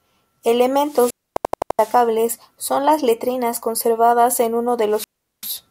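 Speech recorded over a wireless link drops out twice. From 0.79 to 2.09 s the hiss swells, the output falls to near silence for about 0.26 s, and the voice comes back before "son las letrinas conservadas". The same pattern returns from 4.89 to 5.55 s, just after "conservadas en uno de", this time with a hole of about 0.39 s. Both are wireless microphone squelch dropouts. The analogue FM signal faded far enough that the receiver's squelch muted the output rather than pass pure static, then reopened once the signal recovered. Inside the first dropout, from 1.37 to 1.79 s, a short fragment repeats rapidly in a machine-gun stutter at about 11.7 per second. An 85 ms slice plays five times over, identical on each pass. This is a system hang loop. The computer or driver stalled while the audio hardware kept replaying the same ring buffer, and a loop of that length fits a 4096-sample buffer. Essentially no audio is lost around it.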